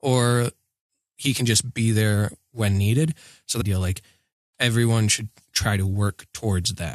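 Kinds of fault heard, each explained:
Stream segment skipped: At 3.6 s, just after "there when needed so", the speech jumps abruptly forward with a brief blip at the join. The sentence does not continue as it should. Part of the programme has simply gone missing. The likely cause is a segmented stream where one chunk failed to load. The player then moved straight on to the next chunk. That would drop a whole segment, typically a second or more, leaving a clean cut rather than a pause.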